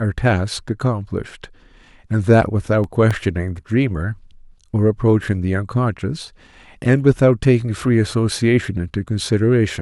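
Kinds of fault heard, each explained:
CD scratch ticks: a surface blemish corrupts more data than error correction can repair once per disc revolution, so the player conceals the damaged samples; here six brief ticks, the longest about 1.5 ms, recur at a steady rate between 2.31 and 3.64 s.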